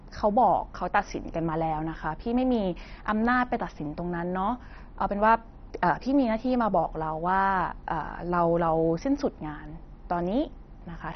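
Throughout, the speech sounds dull, gurgly, with nothing above 6.1 kHz and bands flickering under coarse quantisation; likely heavy MP2 compression starved of bits, fitting about 32 kbps.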